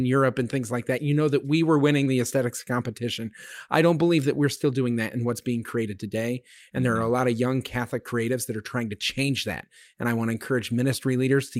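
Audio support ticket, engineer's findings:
Clock drift between sender and receiver. Present for the whole clip. Symptom is an unsteady pace in the speech, with small timing hiccups at uneven intervals. Probable component is the far-end audio clock against the local playout clock. The sender's clock runs fast, roughly 4 percent. Packets arrive quicker than playout consumes them. The jitter buffer keeps filling, so the receiver has to shed audio to hold its latency down.

Repeated timing corrections. From 0.23 s to 11.57 s. Symptom is a string of slight hiccups and a faintly hurried, uneven tempo. Probable component is the receiver's jitter buffer or time-scale adjustment stage. The input runs at 104 percent of the playout rate. Each correction cuts a short piece of audio to catch up with the sender. The edits all go the same direction but are spaced unevenly.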